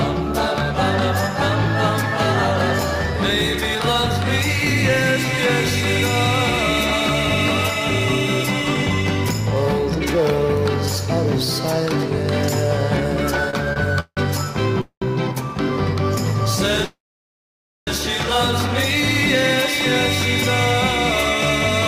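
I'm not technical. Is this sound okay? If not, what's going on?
No. Repeated stalls (stutter) at 13.50–14.19 s: data arrived late, so the audio stopped three times, up to 0.17 s each, stretching the last sound, then resumed.

Call audio freezes at 14.81–15.04 s and 16.84–17.89 s: the sound hangs, fades, then goes silent (0.1 s, then 0.9 s). This is likely delayed network data; the audio then resumes where it stopped.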